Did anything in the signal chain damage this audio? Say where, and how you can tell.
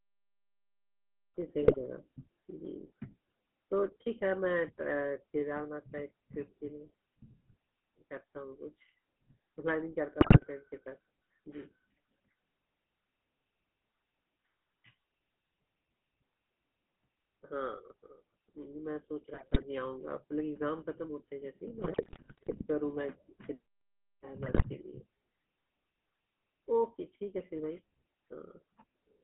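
Yes. The whole clip has a buzzy, gravelly roughness, and everything above about 3.5 kHz and below roughly 150 Hz is gone. This is the GSM full-rate codec, at the codec stage. The decoder rebuilds speech from a vocal-tract filter driven by a sparse, regularly spaced pulse excitation that keeps only every third sample. That coarse excitation causes the grit, and the narrow band is consistent with a 13 kbps full-rate call path.

Five bursts of squawking, popping and gargling break up the speech at 1.63–1.78 s, 10.2–10.64 s, 19.34–19.65 s, 21.78–22.65 s (the longest) and 24.44–24.67 s. These are GSM bit errors from the network stage. On a degraded radio link, corrupted bits reached the decoder inside its filter, pitch and gain parameters. That bent the spectrum or spiked the level frame by frame across each burst, which gives the garbled, jumpy sound.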